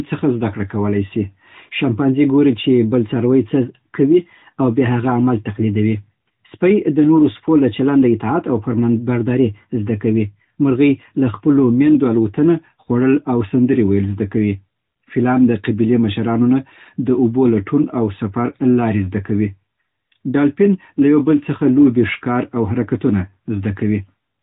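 The speech contains no technical faults at any point.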